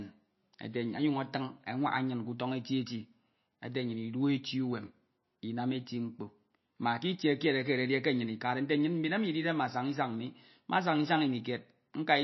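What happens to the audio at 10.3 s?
At 10.3 s the speech carries the same MP3 compression damage heard across the whole clip, not a separate event there. Nothing is left above 5.8 kHz, so sibilants lose their top and sound dull. Weak spectral lines flicker in and out between frames, giving a watery, swirling texture and smeared consonant onsets. The damage is plainly audible, which fits a low bitrate of about 26 kbps, the likely cause being an encoder that is short of bits.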